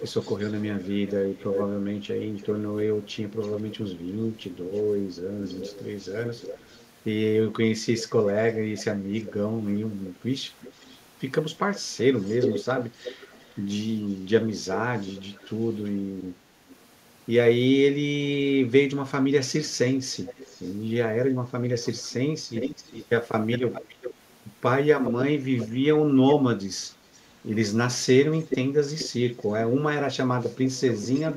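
A loudspeaker end's echo canceller likely failed to remove its own playback and sent it back, so this speech carries an echo leak: a delayed copy of the voice, about 5 to 25 dB below the speech, lagging by 336 ms at first and drifting out to 433 ms. It is heard at 0.0–6.86, 7.99–9.34, 10.61–15.76, 16.69–16.76, 19.68–20.73, 21.83–27.21, 28.38–29.46 and 30.66–31.29 s.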